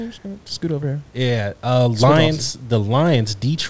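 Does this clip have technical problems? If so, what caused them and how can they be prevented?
No, nothing in this speech clip points to a technical problem.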